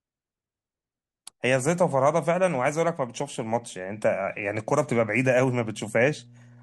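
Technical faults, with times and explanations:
5.22–6.62 s, mains hum: a ground loop or nearby transformer leaks the 60 Hz power line into the signal, adding a steady low drone well beneath the speech.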